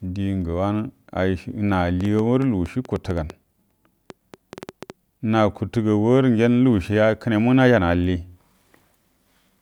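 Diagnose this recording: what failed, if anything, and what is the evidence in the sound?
Train of clicks, 2.01 to 4.91 s: roughly twenty similar pops, irregular at 5.9 per second, peaking about 5 dB above speech, likely interference in analogue wiring.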